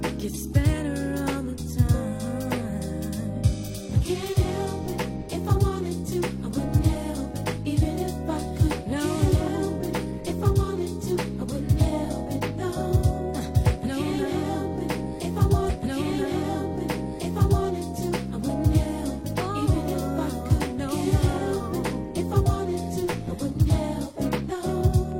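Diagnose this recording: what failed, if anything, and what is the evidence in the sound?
A stream segment repeated at the network and playback stage: the player queued the same chunk of the programme twice. From 15.65 s to 17.65 s roughly two seconds of audio play again, with a small blip at the jump back where the repeat begins.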